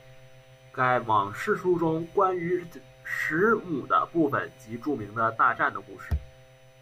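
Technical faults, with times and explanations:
Throughout, USB whine: a fixed tone at 1 kHz with its strongest harmonic at 3 kHz, about 40 dB below the speech, from USB frame current leaking through power or ground.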